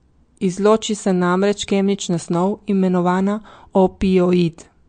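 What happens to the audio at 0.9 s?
At 0.9 s, as throughout, the speech has nothing above 9.1 kHz, a flat ceiling on a spectrogram, plus flickering gaps and a watery swirl, likely MP3 compression near 48 kbps.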